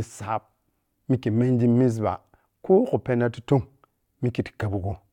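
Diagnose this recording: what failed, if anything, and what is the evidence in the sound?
Nothing failed here; no fault is audible anywhere.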